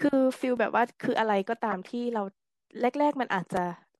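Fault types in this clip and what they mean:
Clock drift buffer slips: A regular click recurs once per second from 0.57 to 3.57 s. The likely cause is two clocks disagreeing by roughly a thousandth, dropping or repeating small sample blocks.
Corrupt frame decoded: A short stretch of energy at wrong frequencies sounds from 1.71 to 1.75 s. Damaged data in a couple of compressed frames was played anyway, peaking around -20 dBFS.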